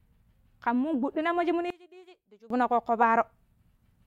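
From 1.70 to 2.50 s, one channel inverted, likely reversing polarity, cancels the centred speech when summed to mono, dropping it about 25 dB to a faint remnant.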